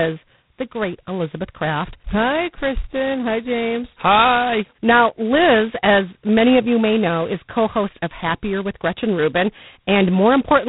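Throughout, G.726 ADPCM coding leaves nothing above 3.9 kHz, and a harsh, rasping hiss tracks the speech level, which fits coarse 16 kbit/s quantisation of prediction differences.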